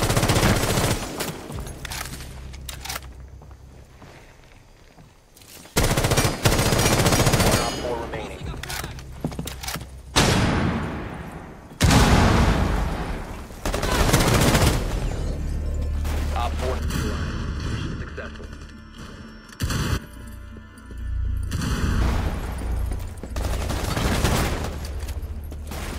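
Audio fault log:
16.79–22.01 s, channel delay (comb filtering): one side lags by about 0.7 ms, so the mono sum notches from around 700 Hz up, sounding hollow and phasey.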